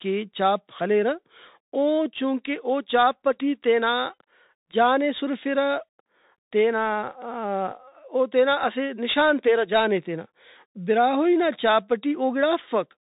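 From start to finish, the speech passes through a Bluetooth CVSD headset codec. Nothing above 3.8 kHz gets through, so the voice sounds narrow and boxed in. The codec sends one bit per sample, saying only up or down, with a step size that adapts. Loud, fast high content outruns that step and distorts. S sounds turn scratchy. A granular hiss sits under the speech. The damage is plainly audible, which fits a 64 kbps link.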